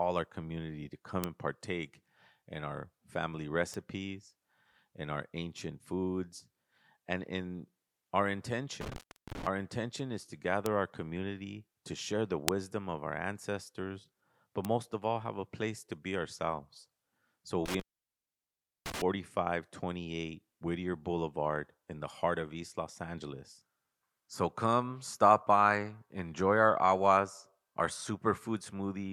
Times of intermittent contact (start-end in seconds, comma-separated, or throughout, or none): 8.81-9.47, 17.66-19.02